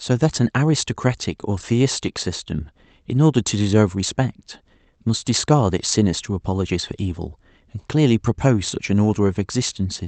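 Technically this speech recording shows no faults: it has come through a WebRTC call path working as intended, with the audio band topping out around 8 kHz as a wideband call codec would leave it.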